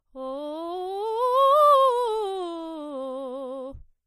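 Throughout the music there is plainly audible damage, most likely from MP3 compression. Nothing reaches above 14.9 kHz, so the top end stops at a hard ceiling and sounds dull. Quiet detail flickers in and out as the encoder drops weak frequency components from one frame to the next. That gives a watery, swirling texture, and transients lose their edge. The damage fits a starved bitrate of around 40 kbps.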